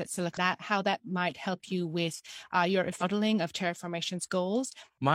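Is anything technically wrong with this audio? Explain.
Yes. Compressed frames are skipped at 0.33 to 0.38 s and 2.98 to 3.03 s: the decoder drops runs of frames, so the speech lurches ahead by about 0.7 s, then about a second.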